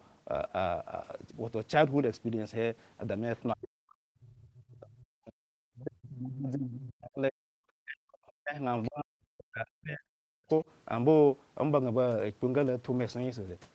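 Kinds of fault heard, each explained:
Other side's voice leaking through: The echo canceller likely failed to strip all of the loudspeaker's playback out of the microphone signal, so the far end's voice bleeds into the call. Here it appears only as brief scraps of about 50 to 60 ms, at 3.36, 8.83 and 10.48 s, sitting low under the speech at about 35, 25 and 30 dB down respectively, heard as faint fragments.
Speech suppressed in double talk: With both sides talking at once, the echo canceller likely could not separate the near talker from the loudspeaker echo and attenuated everything together. The result is the speech dipping, with drops reaching around 40 dB at their deepest, across 3.54 to 7.52 s and again from 7.83 to 10.65 s, roughly four and two seconds of affected audio.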